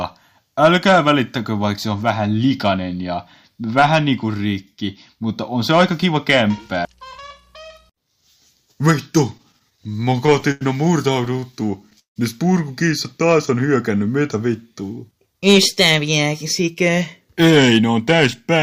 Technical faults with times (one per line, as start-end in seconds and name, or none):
9.37-10.63 repeated stalls (stutter)
11.25-12.18 repeated stalls (stutter)
14.69-16.90 jitter buffer speed-up